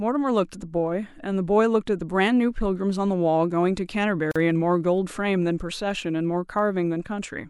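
Clock slip clicks run from 0.12 s to 7.48 s through this speech recording. They are faint, fast ticks about every 30 milliseconds, some two hundred in all, blending into a soft rattle that is clearest on loud, sustained sounds. The likely cause is two unsynchronised clocks drifting apart by around 700 parts per million, so one sample is dropped or repeated each time the error adds up to a whole sample. A gap at a join of encoded pieces opens at 4.31 s and lasts 42 ms until 4.36 s. It is a silence with its edges smeared by the codec, and the speech then resumes where it stopped. Separately encoded segments were spliced without trimming each encoder's start-up delay and final-frame padding.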